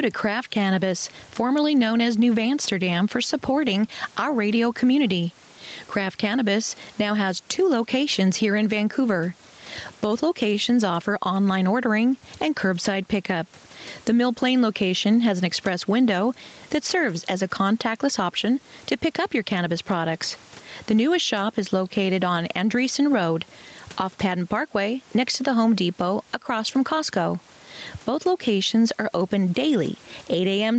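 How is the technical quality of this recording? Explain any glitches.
The main problem is gain pumping, present for the whole recording. The level keeps being pulled down each time the talker gets louder, with a swing of around 10 dB. The likely cause is an input gain set far too high, with a fast compressor or limiter clamping down on every loud syllable and releasing in the gaps. The result is a squashed quality: loud and quiet passages sit unnaturally close in level. The room noise itself sits about 37 dB below the speech, and the sound stops at 8 kHz, consistent with the call's microphone processing and an Opus call path at 32 kbps.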